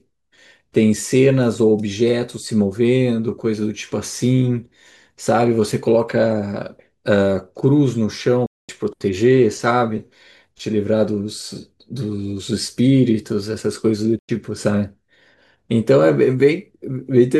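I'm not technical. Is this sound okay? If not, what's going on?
No. The speech cuts to silence twice, from 8.46 to 8.69 s and from 14.19 to 14.29 s. This is a digital broadcast dropout: the receiver briefly lost clean signal, muted, and resumed later, so those moments of speech are missing.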